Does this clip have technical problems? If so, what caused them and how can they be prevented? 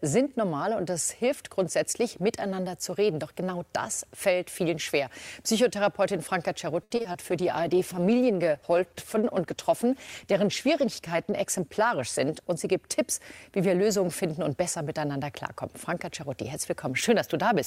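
Yes. From 6.83 to 7.16 s there is repeated packet loss, which gives a robotic sound. Four gaps were patched by stretching the previous sound, and the longest was 70 ms. The result is choppy. Prevention: use a steadier connection, forward error correction, or a larger jitter buffer.

From 7.32 to 14.85 s a call bitrate drop makes the sound rough, watery and dull. This fits the encoder falling from roughly 96 to 15 kbps, with about 4.2 s at the lowest rate. Prevention: secure more bandwidth, or set a higher minimum bitrate.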